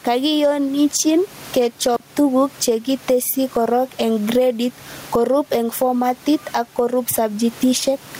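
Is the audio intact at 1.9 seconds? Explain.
No. From 1.94 to 2.0 s the sound cuts out for about 36 ms, with crackle at each edge and faint hiss in the gap. This is an intermittent contact, where a loose cable or plug briefly opens the line. Throughout, the gain also pulls down by roughly 20 dB under loud sounds. That gain pumping likely comes from gain set too high and a fast limiter clamping down.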